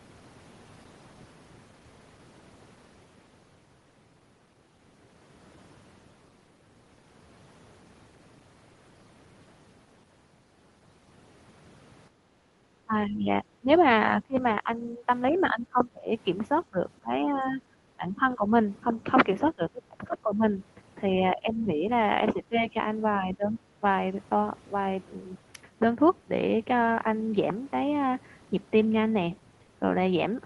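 From 12.1 to 12.58 s the background is gated by the echo canceller, which pulls the microphone down about 10 dB while the loudspeaker plays, so the room sound dips briefly. The talker's speech then dips by roughly 15 to 20 dB in patches at 12.86–13.69, 14.22–16.11, 16.7–18.51, 19.53–20.44 and 21.21–23.84 s. This is likely speech suppressed in double talk, with the canceller mistaking the local voice for echo.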